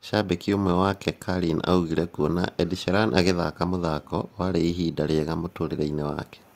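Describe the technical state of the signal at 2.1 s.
Clock drift between sender and receiver is active at 2.1 s: the sender's clock runs roughly 4 percent fast, so the receiver's jitter buffer keeps overfilling and producing small, unevenly spaced timing hiccups. Repeated timing corrections run from 0.15 to 6.55 s, with the receiver trimming short pieces to keep pace at 104 percent speed.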